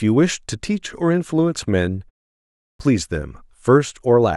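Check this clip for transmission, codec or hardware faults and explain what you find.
One fault is audible: a clipped start after a pause, from 2.33 to 2.79 s. After a 0.31 s gap, the output path evidently dropped into a low-power state and needed time to wake and relock. About 0.46 s of speech is lost, so the sound resumes abruptly without its opening portion.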